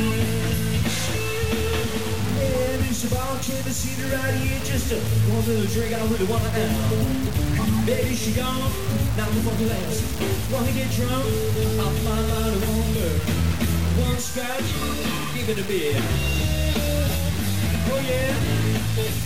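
Throughout the clip, the signal was likely truncated to a low bit depth without dither, consistent with a 4-bit word. The error follows the waveform, so a gritty distortion sits only about 15 dB below the sound and shifts with it, coarsest in quiet passages.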